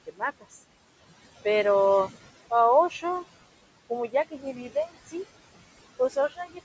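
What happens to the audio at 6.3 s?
Between 5.99 and 6.59 s, including 6.3 s, the noise suppressor cuts into the speech. It mistakes soft speech energy for background and pulls it down by up to about 13 dB, for roughly a fifth of a second in total, so those sounds come out swallowed and faint. On a waveform the envelope dips abruptly where speech should continue, and a spectrogram shows the weaker upper-frequency detail thinning or vanishing in patches.

Noise suppressor artifacts are also present here, as throughout the clip. The suppressor lowers the steady room noise by about 19 dB between sounds and lets it rise under them. A spectrogram shows the noise floor pumping and speckled rather than smooth.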